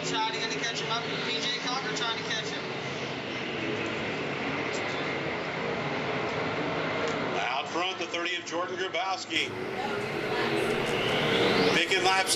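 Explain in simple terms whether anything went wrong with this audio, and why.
Until 9.36 s the sound is dull and a little quieter, with nothing above 7.6 kHz, then clears with no gap. The likely cause is that the input switched to a poorer device.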